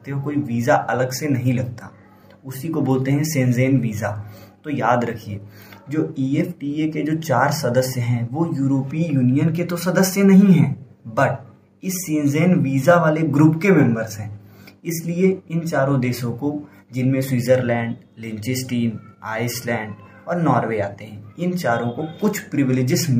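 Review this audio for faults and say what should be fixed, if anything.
Nothing here needs fixing; no faults were found.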